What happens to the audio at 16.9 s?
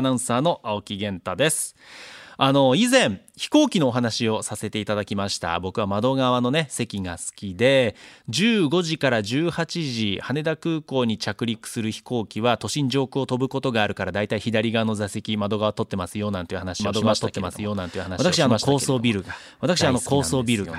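A doubled audio track sets in abruptly at 16.8 s and runs to the end. The likely cause is the sound being captured a second time through a slower path, or an edit leaving two copies out of step. A full-band duplicate, about as loud as the original, trails it by roughly a second and a half. Because the copy has no decay or room colour, the speech overlaps itself as a clean, detached second layer rather than an echo.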